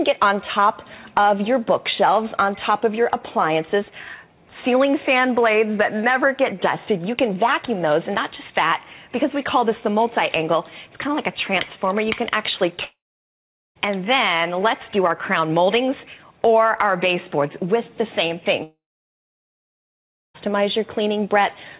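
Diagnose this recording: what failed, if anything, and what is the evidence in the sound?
At 12.84 s and again at 18.63 s the sound breaks off into a short fading buzz, then about 0.79 s and 1.56 s of near-silence, and resumes at 13.78 s and 20.37 s with roughly 0.92 s and 1.72 s of material gone. This is likely a long network dropout: packets stopped arriving, the receiver's concealment briefly stretched the last sound before giving up, and playback resumed past the lost stretch on this 4 kHz-limited call path.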